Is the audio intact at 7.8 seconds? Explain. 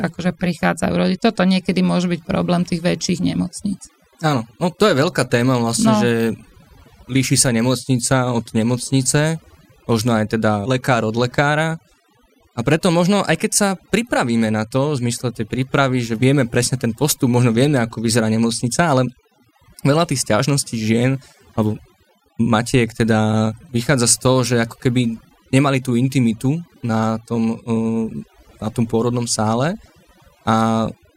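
No. At 7.8 seconds the speech carries overdone noise removal, present throughout the clip. A noise reducer pushed too hard is cutting individual frequency bands near its noise estimate, taking quiet speech detail with them, so the background drops to near-silence sprinkled with twinkling specks. Unlike a noise gate, which mutes everything at once, this works band by band.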